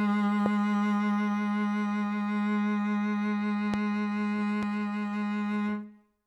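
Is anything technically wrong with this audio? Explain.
Yes, there are three loud pops: sharp single thumps at 0.46 to 0.48 s, 3.74 to 3.76 s and 4.63 to 4.65 s, standing well above the music, which continues underneath. The likely cause is a brief voltage spike from a plug, switch, static or driver glitch.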